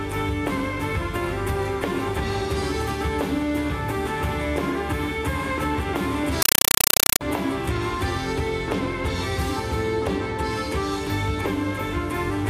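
From 6.42 to 7.21 s the sound gives way to very loud, chattering static, a compressed stream played as audio. An undecoded AC-3 bitstream is being treated as PCM samples, so each frame arrives as a 5.33 ms noise burst then zero padding, 31.25 times per second.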